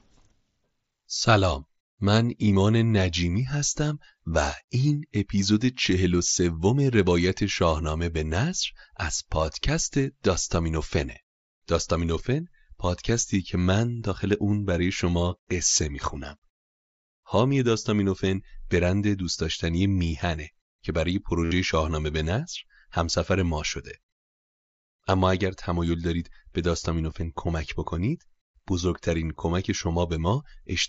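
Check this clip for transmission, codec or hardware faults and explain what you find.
Concealed Bluetooth headset packet loss occurs three times in this speech. Voice packets from the headset were lost, and the receiver filled each gap by repeating the best-matching recent stretch of waveform. The single losses at 10.44 and 27.11 s are nearly hidden. The roughly 70 ms run at 21.45–21.52 s sounds like a buzzy held tone with a slight warble as the real audio returns. The wideband mSBC link itself, carrying speech up to 8 kHz, adds only light graininess.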